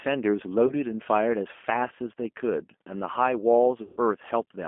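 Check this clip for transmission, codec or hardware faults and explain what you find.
Two faults are present: the call ran through a G.729 codec throughout, and two stretches of VoIP packet loss were concealed by the speech codec.

G.729 codec, whole clip: an 8 kbit/s model-based coder with a line band of 250 Hz to 3.4 kHz rebuilds the speech from a few pulses, leaving it thin, rough and plainly synthetic.

VoIP packet loss concealed by the speech codec, at 0.67–0.75 s and 3.82–3.99 s: the decoder extrapolated from its last pitch and filter over missing audio. The first is a 30 ms gap, which fits a single lost packet. The second is a 150 ms gap, pointing to several consecutive packets. Both come out as a stretched sound that fades, with the second longer.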